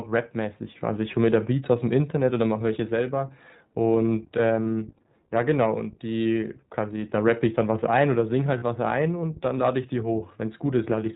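From start to finish the speech sounds band-limited and slightly rough, with a faintly synthetic edge and nothing audible above 4 kHz. This is the iLBC codec at work. It is a narrowband VoIP coder that models each short frame's excitation on its own, without relying on the frame before. The damage is plainly audible, and the sound fits iLBC's 15.2 kbps mode with 20 ms frames.

At 4.64 to 4.66 s the speech briefly turns into a held, slightly buzzy sustain for about 20 ms, which fits one lost iLBC frame. A longer patch of the same smeared, breathy hold runs from 8.58 to 8.64 s, about 40 ms, which suggests two consecutive frames went missing. In both gaps the decoder filled the hole by repeating the last pitch cycle blended with noise. Since each frame decodes independently, normal speech returns right after each gap.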